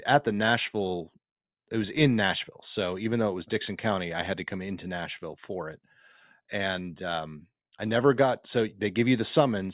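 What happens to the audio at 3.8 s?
Nothing goes wrong at 3.8 s: the speech continues cleanly through that moment with no dropout, click or distortion.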